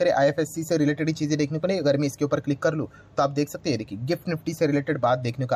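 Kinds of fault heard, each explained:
No faults detected on this audio.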